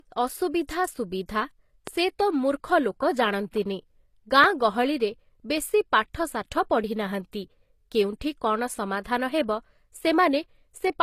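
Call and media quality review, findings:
Low-bitrate audio saved at a high bitrate, whole clip. Nothing above 14.9 kHz. Smeared, watery codec artefacts on speech that the current MP3 layer cannot account for. Likely an earlier low-rate encode, consistent with something like 24 kbit/s HE-AAC, later re-saved as high-bitrate MP3. Removed detail stays lost.

Loud pop, 1.87 s and 4.44 s, about 20 ms each, single sharp transient about 10 dB above the speech. Speech continues underneath. Likely a voltage step from a connector, switch, static discharge or driver glitch, shaped by the downstream circuitry.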